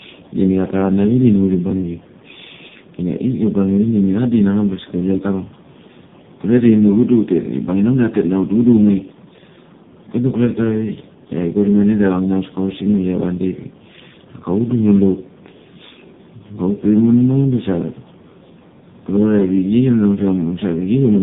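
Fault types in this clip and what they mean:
Tandem speech coding: Throughout, the speech sounds rough, muffled and warbly, with a noisy texture beyond what a single low-rate codec leaves, and nothing above about 3.7 kHz. The call seems to pass through three different speech coders in a row, decoded and re-encoded at each hand-off. Each coder works on the already damaged output of the one before, so the errors stack. The last stage points to a low-rate AMR-NB mode.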